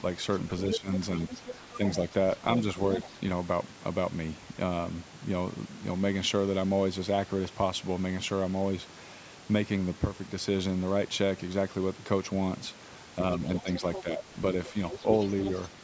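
From 0.5 to 1.96 s, the other side's voice leaks through, only a little quieter than the talker. It likely escaped an incomplete echo canceller. Speech is suppressed in double talk at 0.78 to 0.88 s, dropping steeply, and briefly at 1.77 to 1.81 s. The canceller likely ducked both voices together. More faint leakage follows at 2.56 to 3.1 s, 13.55 to 14.03 s and 14.64 to 15.69 s. The talker dips again from 13.62 to 14.22 s.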